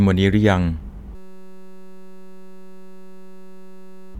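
At 1.15 s the system hangs while the audio hardware keeps replaying one ring buffer. A 5.33 ms slice, which fits a 256-sample buffer, repeats hundreds of times until 4.15 s, replacing the speech with a steady buzz at 188 Hz.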